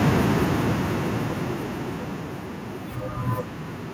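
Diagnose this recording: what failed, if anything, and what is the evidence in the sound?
The automatic gain falling fault is in call processing. The speech starts loud at 0.05 s. The level then sinks steadily until 2.62 s, dropping about 15 dB. The background falls with it. The gain control judged the input too hot, or its background noise too strong, and pulled its gain down gradually.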